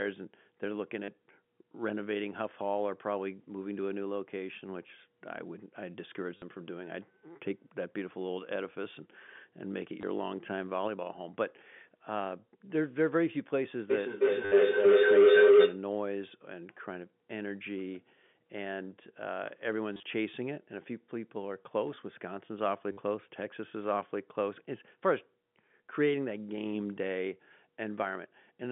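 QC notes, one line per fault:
1.04–1.08, 6.37–6.42, 10.01–10.03, 14.45–14.52, 19.93–20.03, 22.92–22.97 s: packet loss with last packet repeated. Gaps of 20 to 80 ms (the 19.93 s loss is scattered, longest run 30 ms) are filled by replaying one chunk, which fits 10 ms packets. Each gap is a short robotic stutter with a 100 Hz buzz. On the waveform it shows as identical repeating cycles, and on the spectrogram as vertical striping within the telephone band, which ends near 3.5 kHz.
13.9–15.87 s: feedback howl. A second device on the call closes a speaker-to-microphone loop, and each trip adds gain, so the sound narrows to a tone of roughly 400 Hz. It peaks about 14 dB above the speech, with a loop delay of about 0.3 s. On the spectrogram it is a brightening horizontal line, and on the waveform a swelling envelope.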